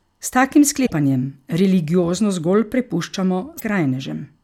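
Damaged data in the compressed stream makes the decoder lose frame sync and hunt for the next header, leaving brief glitches at 0.82 to 0.91 s and 3.57 to 3.62 s.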